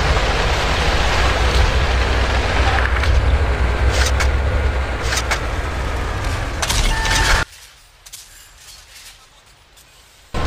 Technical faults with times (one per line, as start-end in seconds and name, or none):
7.43-10.34 one channel inverted